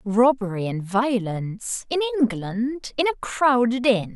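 Nothing in the speech stood out as a technical fault on listening.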